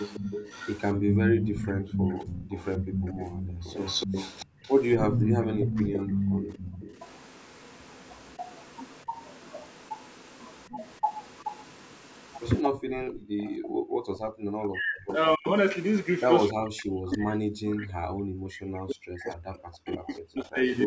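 From the start to 15.15 s there's an echo leak: a copy of the sound trailing by 274 ms and only about 5 dB down, likely a loudspeaker echo the canceller never fully removed. Between 1.91 and 2.43 s the main speech dips by roughly 20 dB, likely speech suppressed in double talk as both ends overlap. At 4.51–4.55 s the room sound briefly drops about 22 dB, background gated by the echo canceller, and it's gated again, much harder at about 40 dB, from 12.81 to 14.39 s. That overlaps another stretch of likely double-talk suppression from 13.62 to 15.48 s, with the speech chopped down by around 40 dB. A final, longer bout runs from 16.5 s to the end, again near 40 dB deep, likely the same cause. Inside it, faint echo leaks, likely loudspeaker echo again, reappear around 17.1 s, 315 ms behind and roughly 30 dB down, and from 19.32 to 20.18 s, 326 ms behind and about 25 dB down.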